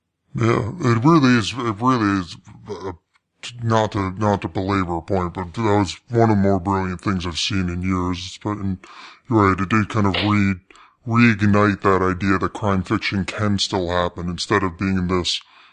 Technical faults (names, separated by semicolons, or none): wrong sample rate